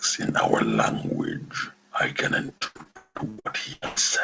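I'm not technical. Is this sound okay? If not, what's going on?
No. From 2.46 to 3.98 s there's repeated packet loss, which gives a robotic sound. Bits of the signal keep going missing, and the call fills each gap by stretching the last sound. Unlike a single dropout, this happens about a dozen times in a row, for up to 0.18 s each, so about half of that stretch is patched-over sound.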